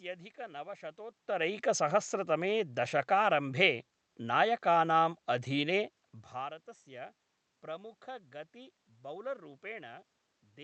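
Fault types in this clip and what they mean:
No technical faults are present.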